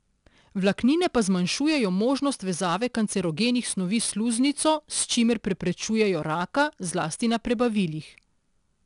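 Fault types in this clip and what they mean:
4-bit ADPCM compression, throughout: each sample is coded as a coarse 4-bit step away from a predicted value, with the step size adapting as the speech moves, so the coding error rides along as a gritty hiss that swells on every loud syllable and roughens sharp consonant onsets where the step lags behind. The damage is plainly audible, and the band stops near 10.6 kHz, which points to a sample rate around 22 kHz and a stream near 89 kbps.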